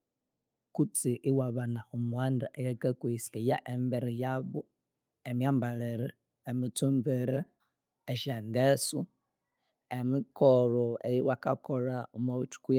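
No technical faults can be heard anywhere in the speech recording.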